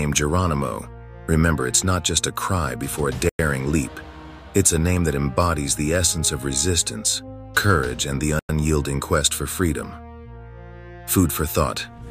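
At 3.29 s the sound drops out for 100 ms and comes back at 3.39 s. An identical hole opens at 8.39 s and closes at 8.49 s. Both have hard edges, abrupt silence and then an abrupt return. This is a gap between chunks. The audio arrived in 5-second blocks, and each join left 100 ms of silence before the next block started. Nothing is lost, but the sound is interrupted at each seam, which is why the holes recur regularly.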